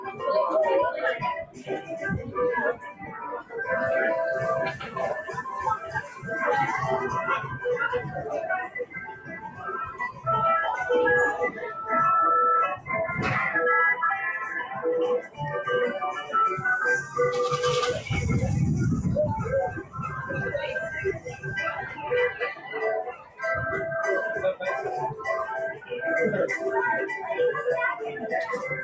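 A speech-tuned noise suppressor was left running on this recording of sounds. It treats steady and decaying parts as noise, so the level pumps by around 10 dB throughout. Sound cut by the noise suppressor is clearest at 0.0–0.22 s, 1.43–3.55 s, 4.77–6.25 s, 7.55–10.27 s, 14.69–17.16 s, 19.68–23.42 s and 25.73–25.92 s, where held or fading sound sinks by about 6 to 15 dB, deepest in the 7.55–10.27 s stretch. The call's microphone processing passes nothing above 8 kHz.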